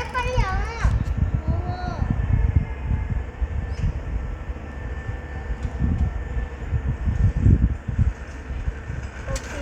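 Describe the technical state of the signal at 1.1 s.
At 1.1 s the signal is intact, with no fault audible at that moment.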